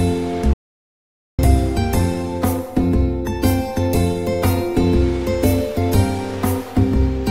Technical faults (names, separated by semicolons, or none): playback stall